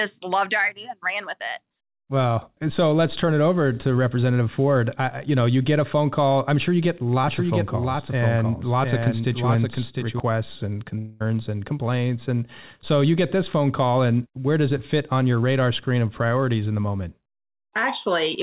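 Speech heard through a telephone-band call path, with nothing above 4 kHz, consistent with G.711 A-law. From 7.28 to 10.20 s a doubled audio track appears: a clean, full-band copy about 5 dB quieter trails the original by roughly seven tenths of a second, starting and stopping abruptly, likely from a second, slower capture path. At 10.98 to 11.22 s a long network dropout occurs: the last sound is stretched into a fading buzz or hiss for about 0.22 s, then speech resumes with that stretch missing, likely from lost packets.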